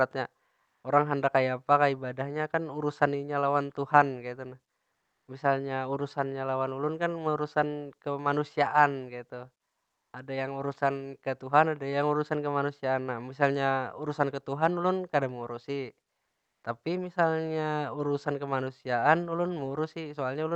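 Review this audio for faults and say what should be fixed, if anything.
Comfort noise in place of the background fills four pauses in the speech: 0.65–0.83 s, 4.91–5.27 s, 9.83–10.13 s and 16.25–16.63 s. The real room tone, about 51–56 dB below the loudest speech, becomes a smooth, featureless hiss, shifting level by about +5, +2, −1 and −3 dB. This is likely Opus discontinuous transmission, with the receiver synthesising noise once sending stops. A spectrogram shows flat, textureless patches with hard edges, and the waveform shows a small step in the noise floor at each boundary. Disabling DTX in the sender's Opus settings would keep the real background flowing through every pause.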